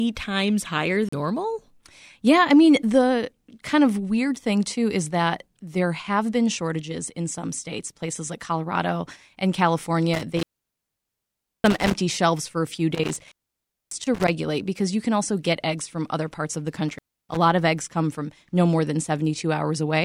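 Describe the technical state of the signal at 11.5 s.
At 11.5 s the signal's caught in an intermittent contact, running 10.14 to 11.94 s: a loose connection opens, so the speech drops out with crackly edges and leaves faint hiss.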